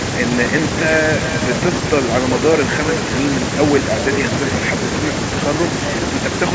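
Throughout the speech there is echo with no canceller: the far end's loudspeaker output reaches its microphone and returns unremoved, so every phrase is trailed, roughly 0.4 s later, by a thin copy about 10 dB down, sitting within the call-band audio that stops at 8 kHz.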